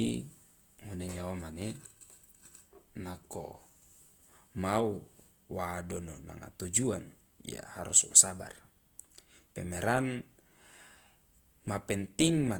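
Throughout the speech, the sound is rough and grainy, with a noisy, gritty texture on voiced sounds even though the band stays fullband up to about 20.1 kHz. This is likely Opus compression in its music-style mode, filling starved bands with noise, which fits a low bitrate around 24 kbps.

From 3.41 to 4.00 s the speech suddenly drags and sags in pitch by about a semitone (105 cents), then snaps back. From 8.21 to 8.95 s it does the reverse, rushing and rising about a semitone (99 cents). Both are likely drift correction steps, where clock-matching software shifted the playback rate by 5.88%, slower and then faster, to adjust its buffer.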